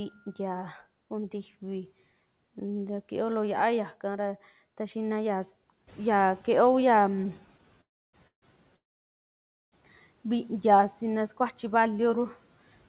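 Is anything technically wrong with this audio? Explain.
Yes, there are three kinds of fault, all in the middle of this speech recording.

Noise suppressor catching up, 5.87 to 7.44 s: the room noise jumps by about 10 dB around 6 s, and the suppressor's noise estimate takes about 1.56 s to follow. The noise first comes through with little reduction, then sinks by about 9 dB as the estimate adapts.

Short stall from a late packet, 7.57 to 7.61 s: a packet arrived late and the jitter buffer ran dry. The receiver held the last sound for about 18 ms until the packet arrived, so the sound is briefly stretched with a slight buzz or dip, and nothing is lost.

Call audio freeze, at 7.81 to 8.15 s, 8.27 to 8.44 s and 8.76 to 9.74 s: the likely cause is packets held up in transit, emptying the jitter buffer. Each freeze starts with a short fading buzz or hiss, then goes silent for about 290 ms, 110 ms and 930 ms. 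The audio then resumes where it stopped, inserting gaps rather than dropping anything. Throughout, the band ends at 4 kHz, which fits the narrowband G.711 mu-law call path.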